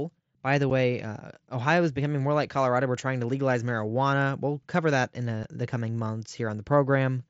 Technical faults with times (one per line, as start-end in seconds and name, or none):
0.70 unconcealed Bluetooth headset packet loss
5.43 unconcealed Bluetooth headset packet loss